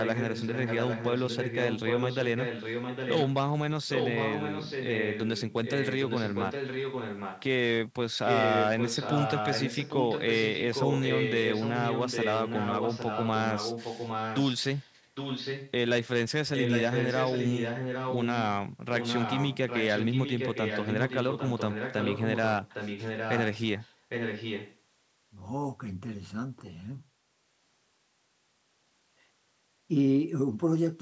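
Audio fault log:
0.0–3.34 s, 3.87–7.43 s, 8.25–14.93 s, 15.15–15.71 s, 16.54–18.44 s, 18.97–23.63 s and 23.8–24.77 s: echo leak. A second, fainter copy of the speech trails the original by about 0.8 s, roughly 10 dB down in most stretches and closer, about 5 dB down, at 8.25–14.93 s, 16.54–18.44 s and 23.8–24.77 s. The likely cause is a far end playing the call over a loudspeaker, with its echo canceller failing to strip the returning sound before sending it back.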